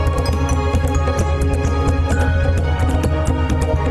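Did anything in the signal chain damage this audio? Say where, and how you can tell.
Yes. Network stage: an adaptive stream at a lower bitrate. From 1.12 s to the end, the spectrogram abruptly loses everything above 12.4 kHz, with no gap, which fits a switch from 64 to 16 kbit/s Opus.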